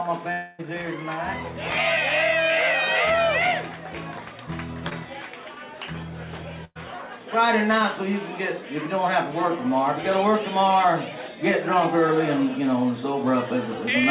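Long network dropout, 0.32 to 0.63 s: a stretch of about 260 ms of sound, likely lost in transit, never arrives. The receiver extends the last sound across the whole gap as a fading buzz or hiss, with no silence, then the audio resumes further on with that section gone.

Short concealed packet loss, 4.89 to 4.93 s: roughly 20 ms of audio misses the decoder, and the receiver patches the hole by carrying the preceding sound forward for about 15 ms before blending back. It comes across as a brief smear or wobble.

Burst of packet loss, 6.65 to 6.77 s: about 100 ms of consecutive audio is lost or arrives too late. The receiver continues the last sound while turning it down, so it decays into a held buzz or hiss, then about 30 ms of silence, before playback resumes past the missing part. Throughout, nothing is heard above 4 kHz, which fits a G.711 mu-law call path at 64 kbps.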